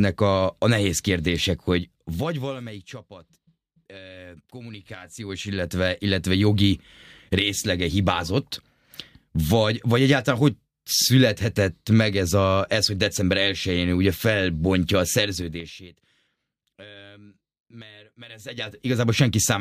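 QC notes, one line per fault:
1.77–3.07 s, 4.55–5.94 s, 15.33–15.88 s and 18.20–18.86 s, zipper noise: the level moves in bare, unsmoothed steps (2 dB, 1 dB, 4 dB and 3 dB in turn), falling about 20 dB, rising about 20 dB, falling about 25 dB, then rising about 25 dB. Each jump puts a tiny discontinuity in the waveform, so at roughly ten steps a second the speech carries a fast ticking, zipping texture while the gain slides.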